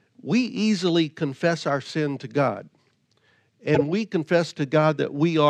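Corrupt frame decoded at 1.68 to 1.70 s in this speech, between "we easily confess" and "sin to", and again at 3.75 to 3.82 s. Damaged compressed frames were played anyway, putting energy at the wrong frequencies. The first is a brief blip peaking around -20 dBFS, consistent with a single frame. The second is a louder burst peaking around -5 dBFS, lasting about three frames' worth.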